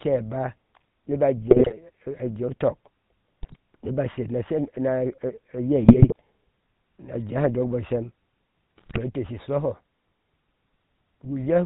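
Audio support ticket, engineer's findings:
GSM full-rate codec throughout: buzzy, gravelly voice, nothing above 4 kHz. The pulse-driven vocal-tract model roughens everything, which fits the 13 kbps full-rate coder.

GSM bit errors: squawks and gargling at 1.50–1.76 s, 3.42–3.56 s (just before "niba sher na shem"), 5.85–6.21 s and 8.76–8.99 s. Corrupted filter, pitch and gain values are bending frames, which points to a few percent bit error rate.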